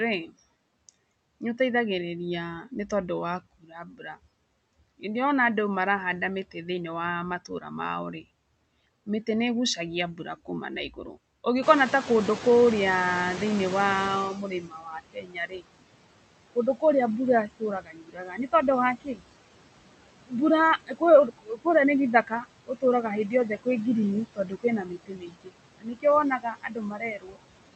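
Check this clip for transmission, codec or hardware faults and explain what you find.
The main trouble is the noise suppressor. It shapes the whole clip and bites into the speech in several places, with one stretch where it lags behind a jump in background noise.

Noise suppressor artifacts run throughout. The suppressor pulls the steady background down by about 21 dB, working band by band, frame by frame. So the noise drops away in the gaps and swells back under the talking. The top end stopping around 8 kHz just fits the Opus call path at roughly 48 kbps, which sits underneath all this.

Speech cut by the noise suppressor happens four times: 2.89 to 5.03 s, 6.48 to 11.45 s (starting right after "andũ marahanda"), 14.33 to 19.22 s, and 20.27 s through to the end. The suppressor mistakes quieter bits of speech, like soft consonants and tails of words, for noise and turns them down with the background. 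Drops reach about 14 to 15 dB in the first two spans and about 21 dB in the later ones, so those parts sound swallowed or faint. That adds up to around half a second in the first span, a bit less in the second, and roughly two seconds in the third.

Noise suppressor catching up runs from 11.62 to 14.42 s. The room noise jumps by about 16 dB around 11.5 s, and the suppressor's noise estimate takes about 2.8 s to follow. At first the louder background comes through with less reduction, then it sinks as the estimate settles to about 15 dB of cut, so you hear the noise wash in and then fade back.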